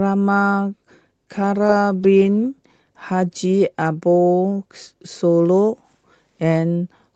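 Nothing goes wrong anywhere in this bit of speech, which simply carries the soft top end around 8 kHz that you'd expect from an Opus call path doing its ordinary job.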